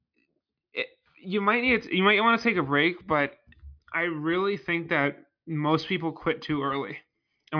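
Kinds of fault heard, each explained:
No audible faults in this speech recording; the signal path shows nothing to flag.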